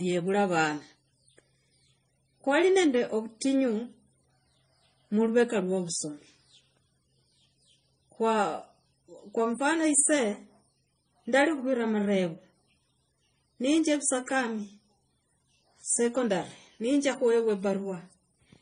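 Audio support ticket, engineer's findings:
Transcoding between lossy codecs, throughout: nothing above 9.7 kHz, mixed artefacts from both codecs. Likely MP3 re-encoded to AAC-LC, consistent with roughly 48 then 32 kbit/s, artefacts compounding.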